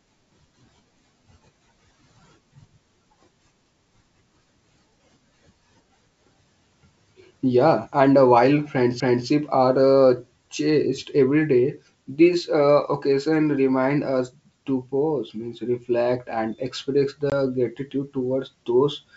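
At 17.30 s, after "means reflect and express", packet loss on the ADPCM call leaves a hard 20 ms gap. Unlike a simple dropout, speech returns slightly distorted while the decoder's predictor resettles.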